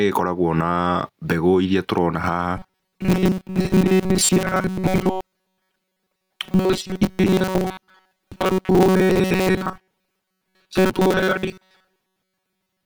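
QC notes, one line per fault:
throughout, gain pumping: a swing of about 15 dB, so loud and soft speech sit squashed together. Likely cause is input gain set far too high, with a fast limiter clamping every peak.
2.57–12.86 s, robotic sound from repeated short buffers: the speech becomes a rigid, metallic 188 Hz buzz that only loosely follows the words, with most of the real audio gone. Likely cause is audio arriving too seldom, so a roughly 5.3 ms fragment repeats, fixing that pitch.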